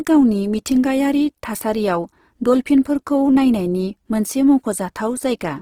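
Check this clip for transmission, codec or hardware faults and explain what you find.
One codec fault runs through the whole clip. Throughout, the speech sounds rough and grainy, with a noisy texture in place of clean tones, though content still extends to about 20.3 kHz. This is likely Opus compression in its CELT music mode, filling starved bands with folded or noise energy, which fits a low rate near 16 kbps.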